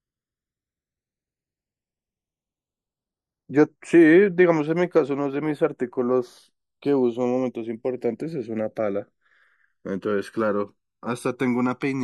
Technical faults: channels drifting apart

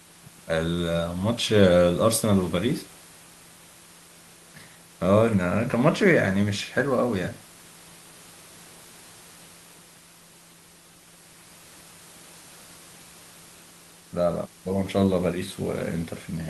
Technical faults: none

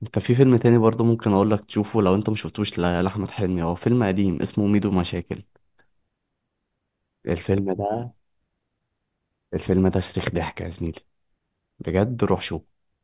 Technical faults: none

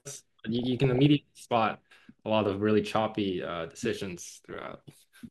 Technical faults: DAB burbling

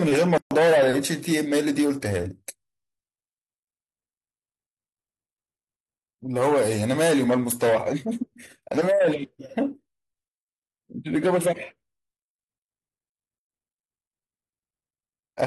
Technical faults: gap at a join of encoded pieces

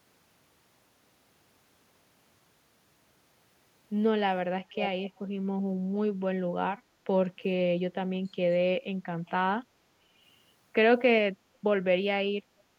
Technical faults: echo leak

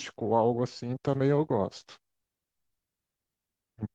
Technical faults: none

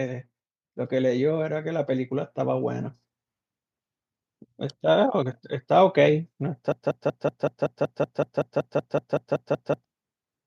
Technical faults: automatic gain rising; broken-record loop

